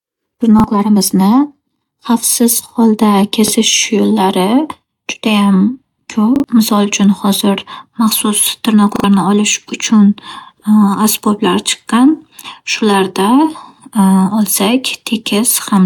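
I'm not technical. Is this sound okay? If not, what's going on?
No. Repeated buffer stutters occur at 0.6, 3.48, 6.36 and 8.96 seconds. The playback device ran short of fresh audio and replayed its last 40 ms chunk: once at the first two points, twice at the last two. Each is a brief stutter, with a little real sound lost after it.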